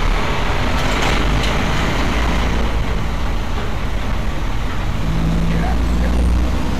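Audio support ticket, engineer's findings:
Hard clipping across the whole clip. Harsh fuzz on every loud event, not just peaks. Input driven about 10 dB past full scale, so roughly a sixth of samples hit the ceiling. Flattened tops add high harmonics. Probable component: input gain stage or converter.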